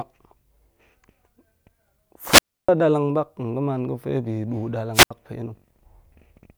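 Twice the wireless microphone's radio signal fades and the receiver's squelch mutes the output, a wireless microphone squelch dropout. From 2.27 to 2.69 s a swell of hiss gives way to about 300 ms of near silence; from 4.94 to 5.11 s a shorter 76 ms hole follows.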